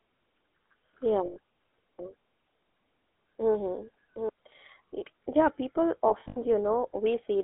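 GSM full-rate codec damage runs through the whole of this speech recording: the voice is passed through the first-generation GSM coder, which rebuilds the vocal tract and drives it with sparse, regularly spaced pulses. The result is a plainly audible buzzy, gravelly roughness on a line band that sits between about 250 Hz and 3.4 kHz. Lost GSM frames occur at 1.26 to 1.38 s, a 100 ms gap, and again from 6.08 to 6.38 s, where 140 ms of dropouts are scattered over 280 ms, the longest run lasting around 70 ms. In each case the decoder holds the last good frame's settings and repeats them, so the voice freezes into a brief, rough metallic ring. A doubled audio track appears from 1.99 to 4.29 s. A second full-band copy of the same sound trails the original by roughly 0.7 s at about 5 dB lower level, with no decay or room colour, and it cuts in and out abruptly. The likely cause is the signal being captured a second time through a slower path, or an edit that left two copies out of step.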